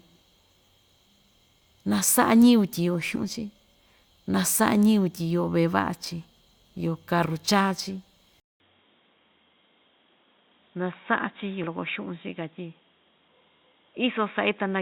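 At 3.15 s the decoder skips compressed frames, missing or rejected as damaged, so the speech jumps ahead by roughly 70 ms, consistent with a few 20 ms frames dropped. Overlapping frames turn the join into a short smeared blip, not a click.

From 8.4 s the input has likely switched to a poorer device. After a 200 ms silence the sound turns dull and boxy with nothing above 3.8 kHz, falls about 5 dB in level, and gains new background noise around 40 dB below the speech.

At 11.63 to 11.66 s compressed frames are skipped again, and another smeared blip marks roughly 70 ms of lost speech.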